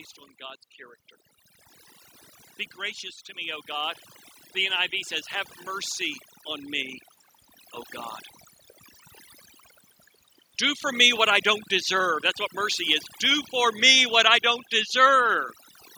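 Overdone noise removal runs through the whole speech clip: the suppressor is set so hard that bands near its noise estimate are pulled down or switched off, taking quiet parts of the voice with them, so the background becomes near silence flecked with twinkling specks. From 2.76 to 5.0 s, automatic gain rising lifts voice and background together by about 6 dB as the gain control, judging the input too quiet, ramps its gain up slowly; a second swell of about 5 dB follows from 5.65 to 7.03 s.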